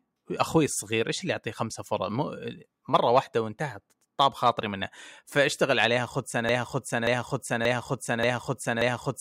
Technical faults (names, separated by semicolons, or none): broken-record loop